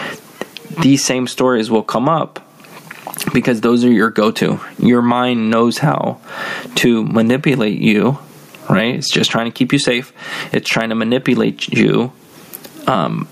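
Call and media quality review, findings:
Gain pumping, throughout: level pumps on loud syllables, loud and soft parts squashed closer together, swing around 25 dB. Likely cause is mic gain set far too high, with a fast limiter clamping every peak.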